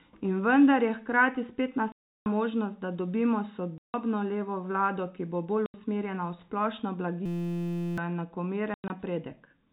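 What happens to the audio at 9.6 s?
Nothing goes wrong at 9.6 s: the speech continues intact through that moment, carried by the band-limited telephone sound of G.711 coding with no dropout, click or distortion.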